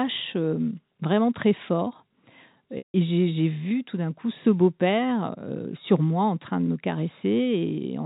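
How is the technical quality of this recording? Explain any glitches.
The sound comes through a telephone-band channel with nothing above 4 kHz, consistent with G.711 coding, and has one clear glitch.

From 2.78 to 2.94 s there is a packet loss with pitch repetition. The sound briefly locks into a held, buzzy tone, fades to silence, then picks up again with a short cross-fade. About 160 ms of audio went missing, which fits several consecutive lost packets. The receiver looped the last pitch period to cover the gap. The gap outlasted that roughly 50 ms fade, so the concealment ran out into silence before real audio resumed.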